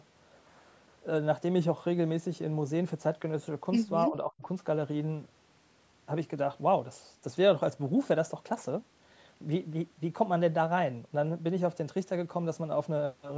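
Around 4.07 to 4.44 s the speech gets chopped down hard, dropping very deep, roughly 40 dB, for about a third of a second in total. That's likely speech suppressed in double talk, with the echo canceller mistaking the talker for far-end echo and ducking everything.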